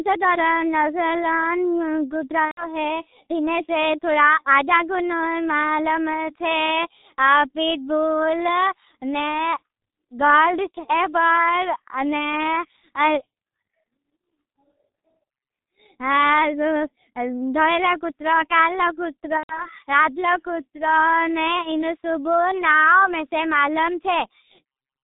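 The speech sounds muffled and hoarse from start to finish, with nothing above 4 kHz and consonants smeared into one another. That is the G.723.1 codec, an early internet-telephony coder working in 30 ms frames, heard here with heavy damage. Its low data rate, which fits about 6 kbit/s, can carry only a coarse, slowly updated model of the voice. Fine detail and quick articulation are lost between updates.

At 2.45 s the speech suddenly turns into a stretched sound that fades until about 2.69 s. The same happens from 19.37 s to 19.67 s. Each is VoIP packet loss concealed by the speech codec. Packets went missing, roughly 120 ms of audio in each case, which fits four 30 ms frames. The decoder kept repeating its last pitch and filter at falling gain, and because each frame builds on the previous one, the voice stays weak and distorted briefly after the packets return.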